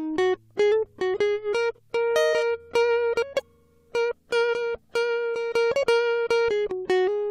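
Compressed frames skipped at 1.52 s, 3.38 to 3.42 s and 5.82 to 5.84 s: whole encoded frames of the music are lost or rejected, so it jumps ahead by roughly 50, 70 and 100 ms.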